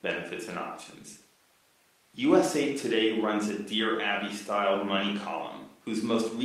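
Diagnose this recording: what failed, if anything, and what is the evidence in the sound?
Nothing in the chain from capture to playback has failed, and the speech signal comes through continuous and intact.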